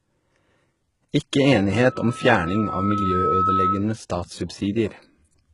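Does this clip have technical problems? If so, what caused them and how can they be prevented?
Yes. Throughout, sibilants sound gritty and lispy, with nothing above 11.1 kHz, likely from heavy HE-AAC compression at a very low bitrate, around 12 kbps. Encode at a higher bitrate to prevent it.

From 1.71 to 3.87 s, a loudspeaker feedback squeal at 1.3 kHz swells over about a second and a half until it's roughly as loud as the speech. Lower the monitor gain or move the mic away from the speaker to prevent it.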